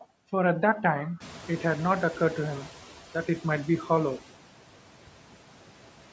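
Throughout the speech, noise suppressor artifacts are present: the suppressor cuts bands it judges to be steady noise by about 12 dB, frame by frame, so the leftover noise dips between words and swells beneath them. From 1.20 to 2.71 s comes noise suppressor catching up. The room noise jumps by about 17 dB around one second in, and the suppressor's noise estimate trails behind, cutting only about 6 dB at first. The louder noise pushes through, then sinks over roughly 1.51 s as the estimate adapts.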